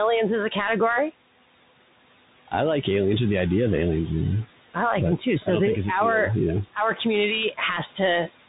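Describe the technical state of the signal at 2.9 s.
Noise suppressor artifacts run through the whole clip, including 2.9 s. The suppressor pulls down bands it judges to be steady noise, cutting about 17 dB, so the room noise, sitting about 15 dB below the speech, dips between words and returns under them.

The Bluetooth CVSD headset codec is also active across the entire clip. Its one-bit up/down coding with adaptive step size, which fits a 64 kbps link, leaves nothing above 3.8 kHz. The damage is plainly audible: s sounds turn scratchy, loud bright sounds distort, and a granular hiss sits under the speech.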